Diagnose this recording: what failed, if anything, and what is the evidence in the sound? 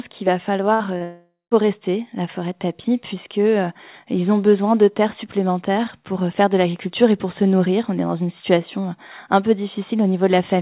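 Network stage, burst of packet loss. The speech is band-limited with nothing above 4 kHz, which fits a G.711 A-law call path. At 0.74 to 0.83 s, packets were lost. The receiver filled about 60 ms by continuing the last sound and fading it down. Speech then resumes further on. About 60 ms of the original audio is gone. The jitter buffer's concealment is what you hear in place of it.

Network stage, short concealed packet loss. At 0.98 s there is a brief smear lasting into 1.03 s. Some packets missed their playout time. The decoder extended the previous sound for about 24 ms, then blended back into real audio. About 30 ms of speech never arrived. So the concealment was shorter than the hole, and a little audio was skipped outright.

Network stage, long network dropout. From 1.03 to 1.54 s, the last sound is carried on and fades away. It then gives way to about 170 ms of silence before speech returns. 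The receiver filled about 477 ms in total. About 480 ms of the original speech is missing. The likely cause is a stretch where no packets reached the receiver at all.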